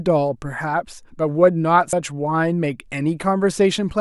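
At 1.93 s, compressed frames were skipped: the decoder never played one whole block of the encoded speech, either because it was missing or because it was rejected as damaged. The speech jumps forward by about a tenth of a second, which fits a single frame of roughly 93 ms.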